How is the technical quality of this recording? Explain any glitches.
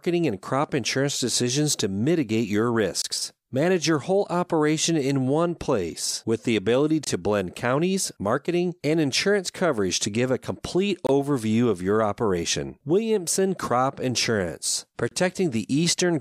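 The speech is broken by a repeating gap at a join of encoded pieces, at 3.02, 7.04, 11.07 and 15.09 s, one every 4.0 s. Each gap lasts about 23 to 26 ms. Separately encoded pieces were joined with their start-up delay and final-frame padding left in. The result is a brief dropout, after which the speech resumes where it stopped. On a waveform it shows as a flat line. A spectrogram shows a thin blank vertical stripe across all frequencies, with slightly smeared edges.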